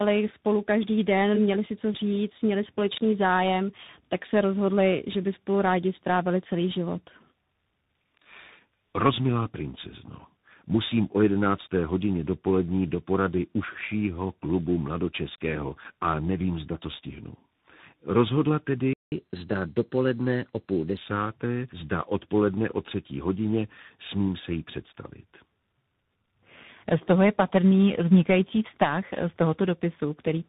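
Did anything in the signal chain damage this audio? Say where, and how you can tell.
Yes, at the codec stage, for the whole clip. This speech is rough, muffled and warbly. That's tandem speech coding: it sounds like three speech codecs in a row, with the final grainy texture fitting CVSD. At each link boundary the call was decoded and then re-encoded, so every coder worked on the previous one's damage. The artefacts pile up, which is why it sounds worse than any single codec would.

At playback there's a playback stall from 18.93 to 19.12 s. The audio drops out mid-flow for about 185 ms and then carries on. That points to the player running dry on data, or its thread getting blocked, likely a buffer underrun. Nothing comes out until it recovers, so you get a clean gap rather than noise or a glitch.

Right after, from 19.12 to 20.97 s, there's catch-up at higher speed. The audio runs at 1.1x, and the pitch rises by about a semitone and a half. 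The player is resampling its backlog faster to win back the time lost in the stall. Because it's resampling rather than time-stretching, speed and pitch go up together. Both settle back to normal once the backlog is gone.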